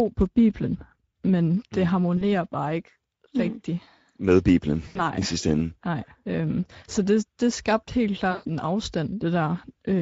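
Across the whole speech clip the sound is hoarse and grainy, with a noisy, rough edge on every voiced stretch. This is Speex codec damage, and it is plainly audible. The codec models the voice with a pitch-and-filter approach and spends only a limited budget on the excitation signal, so detail is replaced by a coarse, noisy approximation. The level of damage points to a middle-quality setting around 16.8 kbps.

At 2.17 to 2.24 s, right after "men det mm" and before "bare ikke", the voice briefly stretches and fades for about 40 ms. The same happens at 4.87 to 5.02 s for about 80 ms, just before "i sidste ende". The longest instance is at 8.31 to 8.49 s, after "det det skabte helt", where the sound stretches and decays for about 140 ms. These are VoIP packet losses concealed by the speech codec. When packets went missing, the decoder kept extending its last pitch and filter with falling gain. 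The lengths fit runs of 20 ms frames, and the voice sounds weak and distorted for a short time after each gap while the decoder recovers.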